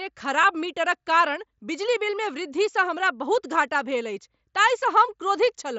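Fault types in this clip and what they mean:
concealed Bluetooth headset packet loss: A barely noticeable blip near 0.43 s, where a few milliseconds of speech briefly repeat before the real signal resumes. About 7.5 ms was lost between headset and phone, which fits one dropped packet, and the receiver patched it with a matching stretch of the preceding waveform.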